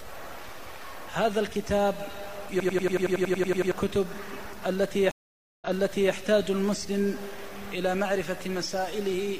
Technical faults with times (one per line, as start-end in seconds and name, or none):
2.60-3.72 system hang loop
5.11-6.13 stream reconnect